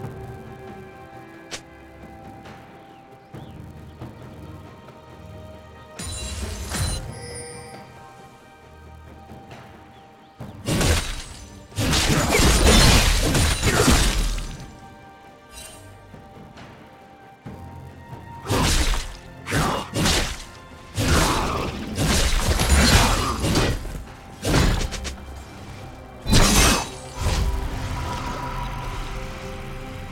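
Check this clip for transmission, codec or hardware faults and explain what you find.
One fault is present, and it runs through the whole clip: a filter restarted on every block. The processing filter discards its internal state at each block boundary and begins every block as if from silence, so each block starts with a small transient. These transients recur 200 times a second, which fits blocks about 5 ms long. The result is a steady 200 Hz buzz that rises and falls with the level of the sound.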